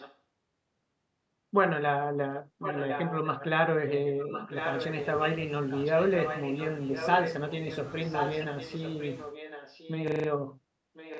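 From 0.0 to 0.18 s, then 2.6–3.45, 3.87–5.08, 5.7–6.67, 6.86–7.78, 8.07–9.94 and 10.94–11.19 s, a faint-to-strong copy of the speech trails about 1.06 s behind. This echo leak, likely an echo canceller missing loudspeaker pickup, shows as duplicated, time-shifted formant patterns on a spectrogram.

At 10.08–10.28 s, a system hang loop repeats one 40 ms slice five times, a 25 Hz stutter. The waveform shows identical repeating blocks, and the spectrogram shows evenly spaced vertical seams, all below the 8 kHz ceiling.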